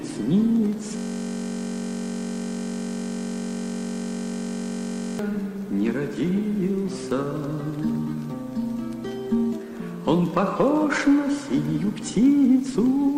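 From 0.97 s to 5.19 s a system hang loop takes over. The playback side froze while the hardware kept replaying one 21.33 ms piece of its ring buffer, which fits a 1024-sample buffer. That gives a steady buzz at 46.9 Hz. On a spectrogram it shows as evenly spaced harmonic lines, and the waveform repeats identically.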